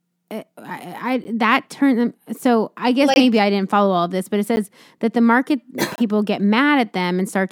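Blocks of digital silence at 1.24, 3.14–3.16, 4.56 and 5.96–5.98 s zero out 10–24 ms of samples, cutting out and back with no fade: flat waveform gaps, blank spectrogram strips.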